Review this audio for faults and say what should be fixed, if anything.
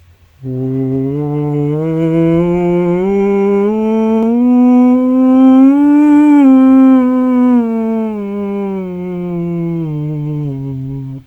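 No faults turn up in this music, so nothing needs to be fixed.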